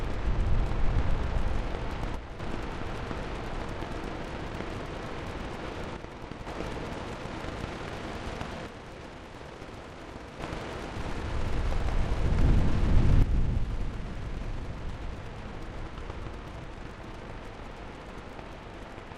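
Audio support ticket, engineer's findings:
Level drops by about 6 dB at 2.16–2.40 s, 5.96–6.47 s, 8.67–10.40 s, and from 13.22 s to the end. Edges are abrupt, with no fade or silence. Likely one channel drops out: the mono sum loses half of shared content, and anything only in that channel vanishes. It differs from a full dropout because the sound never disappears, and from a gain fault because the fixed 6 dB step fits a lost channel.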